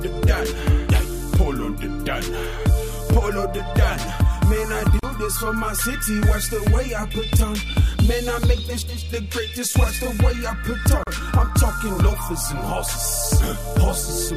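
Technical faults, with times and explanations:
4.99–5.03 s and 11.03–11.07 s, gap at a join of encoded pieces: gaps of 39 ms and 37 ms, six seconds apart, cut into continuous sound. Separately encoded segments were joined with their encoder start delay and final-frame padding left in, so the sound drops out and resumes where it stopped.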